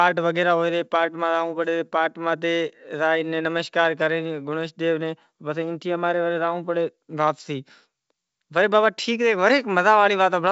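Nothing stood out on listening to this speech clip, which carries the bandwidth of wideband G.722 telephone coding at 64 kbit/s.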